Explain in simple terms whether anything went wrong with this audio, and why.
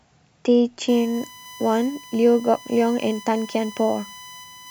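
From 0.88 s onward, a steady 1 kHz whine runs under the speech. This is USB whine: the bus's 1 ms power pulses leaking into the audio.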